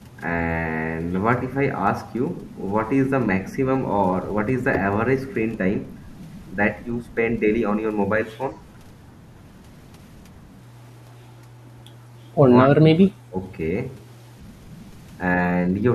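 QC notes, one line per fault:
12.78–13.36 s, speech suppressed in double talk: the speech level collapses by roughly 25 dB at its deepest, with about half a second of the span affected in total before the level recovers. The likely cause is an echo canceller meeting simultaneous far-end activity: unable to tell the near-end talker apart from loudspeaker echo, its suppressor attenuated everything, near-end speech included, for the overlap.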